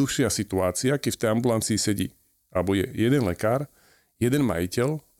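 No technical faults can be heard anywhere in the recording, and the speech signal stays steady and intact throughout.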